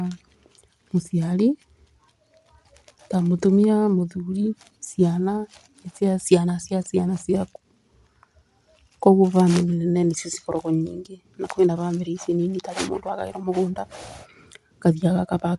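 Bluetooth LC3 compression affects this speech recording throughout: nothing reaches above 11.6 kHz, and the top of the band has a plainly audible grainy edge. The likely cause is LE Audio's transform codec, working in 10 ms frames at a rate fitting a 48 kbps stream, which drops upper spectral detail and fills it with noise.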